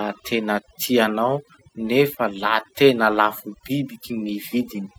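Throughout this speech recording, the background drops to an unnatural near-silence scattered with twinkling specks, and the softer parts of the voice seem to dissolve. These are the signs of overdone noise removal: a noise reduction stage was driven too hard, so individual frequency bands that sat close to its noise estimate were pulled far down or switched off, taking the quieter components of the voice along with the noise.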